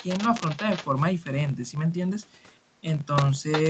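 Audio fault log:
throughout: filter restarted on every block. A filter discards its state at each block boundary and starts from silence, so every block opens with a small transient, heard as a 46.9 Hz buzz that rises and falls with the speech level, consistent with 1024-sample blocks.
0.00–0.24 s, 0.46–0.85 s, 3.52–3.62 s: echo leak. Most likely, the far end's echo canceller let part of its loudspeaker pickup through, returning a delayed copy of the speech about 0.36 s late. It sits about 15 dB under the speech, rising to about 5 dB under near the end.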